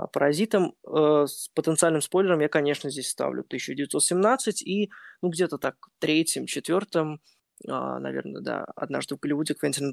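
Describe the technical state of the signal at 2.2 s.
At 2.2 s the speech signal is intact, with no audible fault at that moment.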